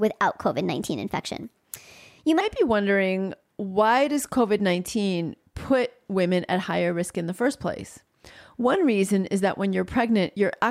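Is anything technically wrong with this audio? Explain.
Yes. From 0 to 2.41 s a section at the wrong speed plays 1.21 times fast, likely a clock mismatch, raising pitch about three semitones; unlike pitch shifting, tempo rises too.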